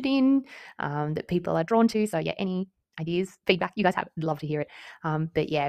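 From 1.6 to 4.7 s, just after "in um that people", the speech suddenly rushes ahead at about 1.75 times its normal pace while its pitch stays put, giving a rushed delivery before it settles back. This is a time-stretched section, likely caused by software squeezing that stretch of audio to fit a shorter length, cutting out short slices of the waveform so the timing compresses without raising the pitch.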